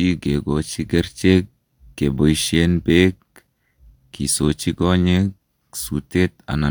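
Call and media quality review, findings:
No technical faults found; the speech signal is steady, with no dropouts, distortion or timing disturbances anywhere in the recording.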